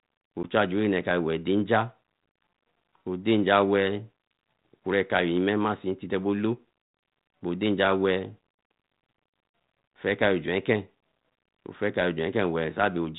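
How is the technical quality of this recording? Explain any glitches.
One glitch stands out, over a light G.726 ADPCM layer at 32 kbit/s. At 0.43 s, packet loss on an ADPCM call drops about 10 ms, likely a single packet, to silence. The decoder's predictor then falls out of step, so speech returns slightly distorted before settling.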